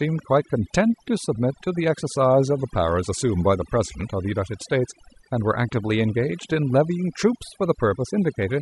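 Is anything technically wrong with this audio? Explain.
Yes. Overdone noise removal runs through the whole speech clip. Aggressive reduction cuts bands near the noise estimate, leaving near-silent, twinkling gaps.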